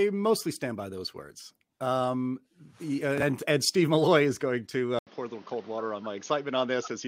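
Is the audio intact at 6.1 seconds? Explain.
No, at 6.1 s the speech is still on what's likely a poorer input device, a switch that starts at 4.99 s and runs to the end. After a short 80 ms gap, everything above 6.7 kHz disappears, so it sounds dull and boxy, with a faint new noise floor underneath.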